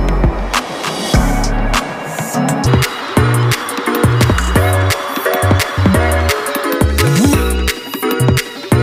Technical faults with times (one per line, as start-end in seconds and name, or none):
2.66-8.82 section at the wrong speed